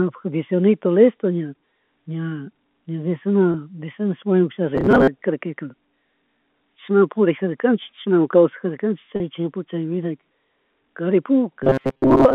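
Speech over a G.711 A-law phone line (band roughly 200 Hz to 3.5 kHz), with two kinds of damage. First is packet loss with pitch repetition. At 3.52 s a gap of about 20 ms, fitting a single lost packet, gets patched by repeating the last pitch period. At 9.16 s a 40 ms gap gets the same patch. Each one comes across as a brief held, slightly buzzy note. Second is a robotic sound from repeated short buffers, from 4.75 to 5.09 s and again from 11.63 s to the end. The sound turns into a rigid metallic buzz locked at 133 Hz, which fits a loop of about 7.5 ms. The likely cause is audio arriving too seldom, so the software keeps replaying that short buffer. Meanwhile the real audio is skipped, about half of it in the first stretch and most of it in the last.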